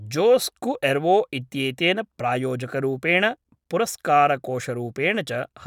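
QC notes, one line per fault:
No technical faults are audible in the speech. Nothing in it calls for a QC note.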